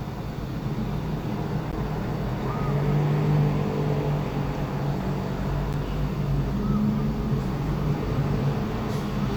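Gap between chunks at 1.72 s and again at 5.73 s: the sound breaks into a hole of 12 ms each time, four seconds apart, because the audio was delivered in 4 s chunks and silence was inserted at each join. Nothing is missing, only interrupted.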